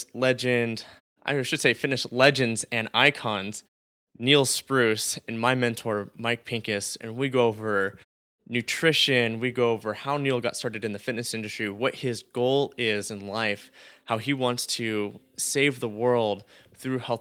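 Nothing in the speech stood out as a technical problem on listening.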